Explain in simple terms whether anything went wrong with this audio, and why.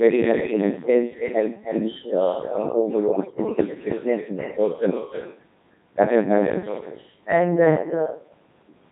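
Several things went wrong. The whole recording carries an echo with no canceller: every bit of speech is followed, about a third of a second later, by a quieter, hollow copy. It comes from the far end's loudspeaker feeding back into its own microphone. Unlike room reverberation, which smears smoothly, this is a distinct delayed repeat.

The voice also sounds robotic and buzzy throughout because it passed through the Codec 2 vocoder at a very low rate, with heavy damage. The decoder rebuilds speech from pitch and tone estimates rather than the real waveform, so it sounds artificial even where nothing drops out, unlike ordinary muffled or crackly compression.

From 3.12 to 3.38 s, bit errors on digital voice radio break the sound into bleeps, warbles and gibberish, with sudden jumps in pitch and loudness. Corrupted data briefly scrambled the vocoder's settings. It garbles the sound instead of going silent the way a dropout would.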